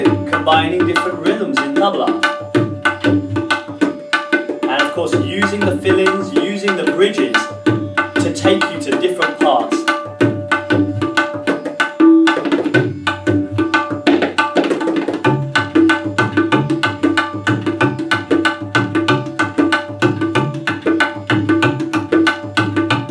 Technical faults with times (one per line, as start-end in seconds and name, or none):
none